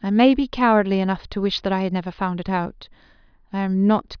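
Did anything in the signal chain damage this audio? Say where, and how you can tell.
No, nothing along the chain has audibly damaged this speech, and there is no stage to point to.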